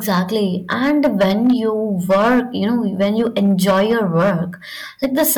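From start to finish, the signal arrives about 10 dB hotter than the stage carrying it can pass, so every peak is cut flat at the ceiling: hard clipping. Only a few percent of the samples actually hit that limit, but they sit on the loudest parts of the speech, and each squared-off peak throws harmonics high into the spectrum. The result is a harsh, buzzy fuzz riding on every stressed syllable and louder burst.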